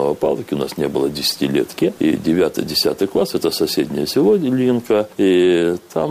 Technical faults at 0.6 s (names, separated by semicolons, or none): none